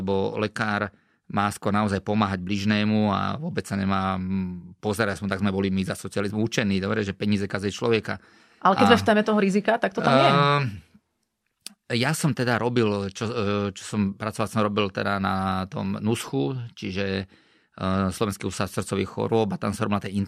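No technical faults can be heard anywhere in this speech recording. Nothing breaks, cuts out or glitches at any point in the audio.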